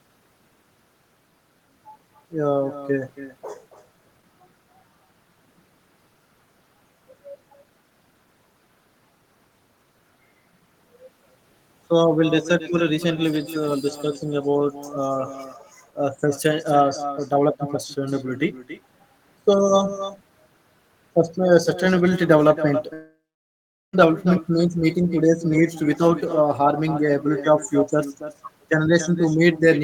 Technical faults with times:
0.00-29.84 echo with no canceller
22.93-23.95 long network dropout

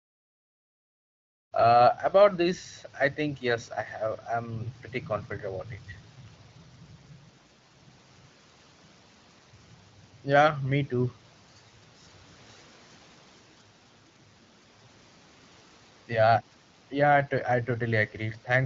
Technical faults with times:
none

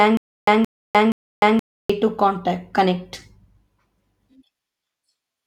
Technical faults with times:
0.00-1.90 stutter with silent gaps

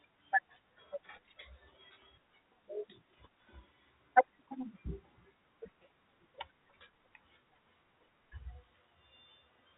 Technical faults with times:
none

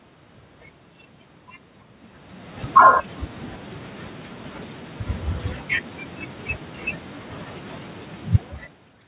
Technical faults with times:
2.62-2.96 automatic gain falling
2.87-3.26 automatic gain rising
7.91-8.88 automatic gain falling

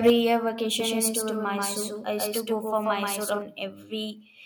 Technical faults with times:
0.06-0.10 microphone overload
0.10 microphone volume stepped down
0.80-3.42 doubled audio track

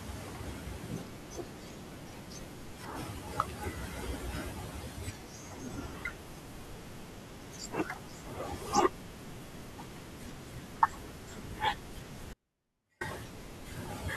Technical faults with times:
12.33-13.01 audio dropout to a faint residue

